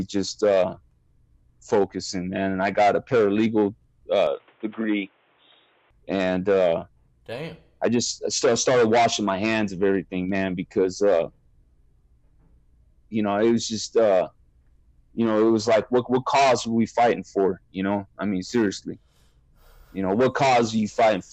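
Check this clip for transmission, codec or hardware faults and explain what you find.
One fault stands out: a brief input switched to a poorer device.

From 4.27 to 5.91 s the sound turns dull and boxy, then clears again, with no gap at either switch and little change in level. Nothing remains above 3.8 kHz, and a faint new noise floor appears. The likely cause is the input moving to a narrower-band microphone or a headset call profile. On a spectrogram, the upper energy vanishes abruptly above 3.8 kHz for that stretch, while the waveform's envelope barely shifts.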